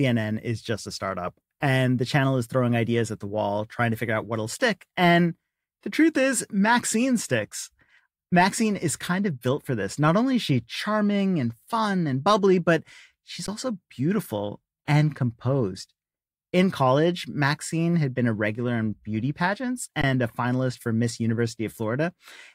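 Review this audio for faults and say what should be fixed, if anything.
Twice the output buffer ran dry and the converter held its last sample value, an underrun with held sample: at 13.47 s for 15 ms, and from 20.02 to 20.04 s for 20 ms. The speech drops out onto a flat line at whatever level it last reached, then resumes with roughly 15 and 20 ms of audio lost. A larger output buffer or higher playback-thread priority would keep it from draining.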